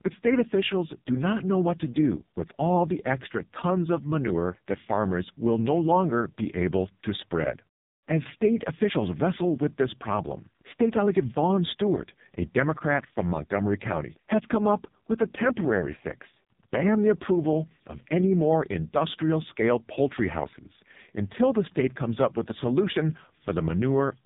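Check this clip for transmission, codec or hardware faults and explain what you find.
The speech has passed through an AMR narrowband mobile codec for its whole length. It is the one fault present, and the damage is heavy.

From start to finish, the signal was squeezed into the narrowband mobile speech codec. That codec samples at 8 kHz and rebuilds each 20 ms frame from a vocal-tract filter excited by a handful of pulses. Nothing survives above about 3.8 kHz, so the speech sounds muffled and telephone-like. The severe buzzy, synthetic coloration points to the codec's lowest mode, around 4.75 kbps, where too few pulses are left to model the voice faithfully.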